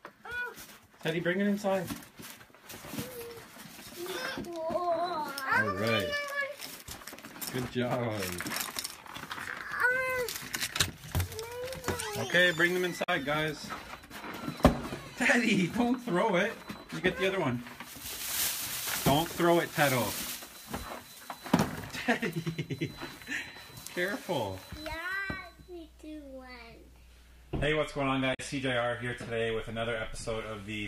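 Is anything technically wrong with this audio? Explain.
Yes. Damaged data in a compressed stream at 13.02–13.09 s and 28.33–28.40 s: corrupted bytes make the decoder misread frames and lose sync, producing a brief blip each time.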